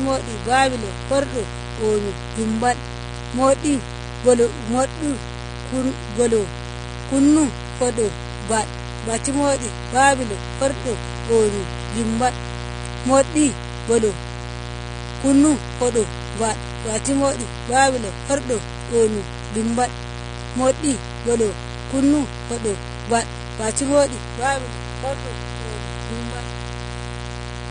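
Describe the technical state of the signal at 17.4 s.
At 17.4 s, as everywhere else in the recording, a mains buzz sits under the speech at roughly 10 dB below it. Sharp switching spikes, twice per 60 Hz cycle, leak into the signal chain and stack up a ladder of 60 Hz harmonics reaching into the kilohertz range, so it sounds raspy rather than like a smooth low hum. That bright, gritty edge sets it apart from a plain sinusoidal ground-loop hum.

The speech also sounds dull and smeared, with a warbling, fizzy texture on sustained vowels and sibilants, and the spectrum stops dead at 9.7 kHz. This is plainly audible codec damage, likely from AAC compression at a low bitrate around 32 kbps. The encoder drops frequency lines that its hearing model judges expendable. The hard cut-off combined with that swirling, metallic smear distinguishes it from a simple low-pass filter, which would dull the sound without the warble.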